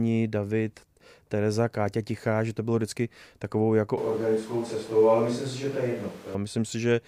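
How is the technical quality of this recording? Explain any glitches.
There's one glitch. From 3.97 to 6.35 s, right after "bylo vždycky takovou jako", the speech turns hollow and roomy with thinner bass, likely a switch to a distant microphone. Level holds steady, but room noise rises to roughly 25 dB under the speech.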